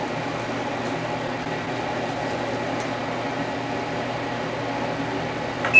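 A recording of sounds carried over a call path whose G.722 coding leaves nothing above 8 kHz. From 2.58 to 3.29 s there is a jitter buffer slow-down: the receiver stretched the audio by about 48 ms to rebuild its reserve, repeating short stretches of the waveform, so this section plays at roughly 95% speed with unchanged pitch. Sounds in that span come out slightly drawn out.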